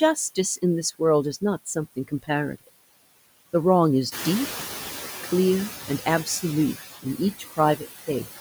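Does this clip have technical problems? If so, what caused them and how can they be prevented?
Yes. Noise suppressor artifacts run throughout: steady background noise is pulled down by about 14 dB frame by frame, leaving a residue under the speech. Gentler suppression settings would reduce that residue.

Speech cut by the noise suppressor occurs at 1.96 to 2.29 s, 7.39 to 7.59 s and 8.03 to 8.4 s, where the suppressor mistook quiet speech for noise. Short stretches of about a tenth of a second drop by about 14, 14 and 16 dB and sound swallowed. A less aggressive suppressor with better speech detection would protect these soft parts.

The noise suppressor catching up runs from 4.11 to 5.07 s. The room noise, which is part of the recording, jumps about 11 dB near 4 s, and the suppressor's noise estimate takes 960 ms to follow. During that time the noise is reduced by only about 8 dB before it settles lower. 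A faster-adapting noise estimate would shorten this lag.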